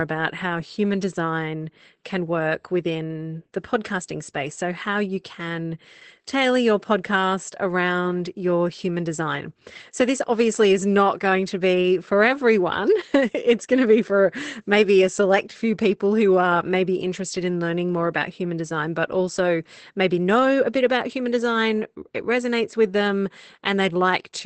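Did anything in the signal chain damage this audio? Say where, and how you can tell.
Yes, at the codec stage: Opus voice compression runs through the whole clip. The speech has nothing above about 8.6 kHz, the wideband ceiling of a speech codec, and the coding damage is plainly audible from start to finish. The sound points to Opus's SILK linear-prediction mode at a low bitrate, around 12 kbps. At that rate the coder models the vocal tract with a filter and spends too few bits on the excitation signal that drives it.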